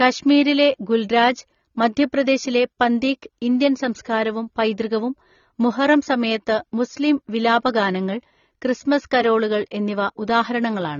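AAC compression runs through the whole speech clip. Nothing is heard above about 6.9 kHz, and the speech sounds dull and smeared, with a warbling, fizzy texture on sibilants and held sounds. The likely cause is AAC-LC encoding at a low bitrate, around 24 kbps, where too few bits are available. The encoder drops the top of the spectrum and quantises the remaining bands coarsely, leaving gaps that shift from frame to frame.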